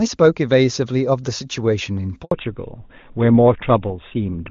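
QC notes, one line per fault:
2.23–2.31 s: handover gap. The sound dies away quickly and stays silent for 80 ms while the call switches networks. No speech frames arrive during the switch, so that stretch is simply missing rather than concealed. Sound resumes only once the new link is up.
2.31 s to end: fallback to narrowband. After the gap nothing remains above 4 kHz, so the speech turns duller and rougher. This fits a drop from wideband HD Voice, clean beforehand and consistent with its top rate, to an older narrowband codec such as GSM full rate.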